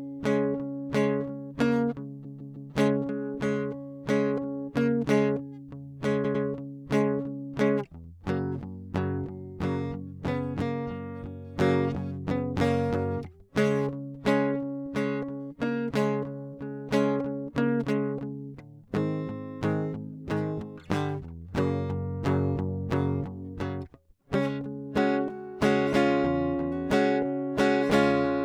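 Repeated frames: a run of compressed music frames was delivered more than once, so a 157 ms block plays three extra times from 2.24 to 2.71 s and a 105 ms block twice more from 6.23 to 6.44 s, each a stutter.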